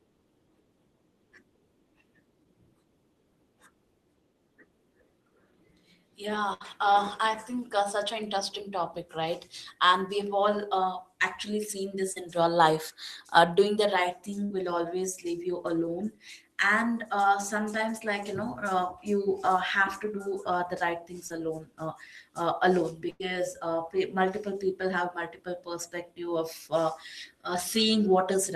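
Burst of packet loss hits this speech recording at 6.53 to 6.62 s and again at 23.10 to 23.22 s. Around 60 ms and then 100 ms of audio never arrived in time, so the receiver extended the last sound and faded it down, giving a held buzz or dying hiss before playback jumps ahead with that stretch gone. Short concealed packet loss appears at 12.12 to 12.18 s, 14.46 to 14.52 s and 21.28 to 21.32 s, where 40, 40 and 20 ms went missing. The decoder patched each hole by continuing the preceding sound, pitched or noise-like, then crossfading back, which leaves a brief smear or wobble and can swallow a short consonant.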